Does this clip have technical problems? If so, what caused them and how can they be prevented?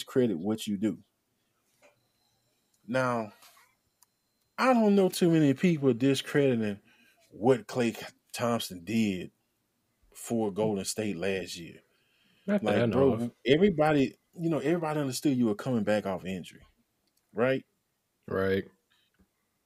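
No, nothing in this speech clip points to a technical problem, so there's no cause to track down and nothing that needs preventing.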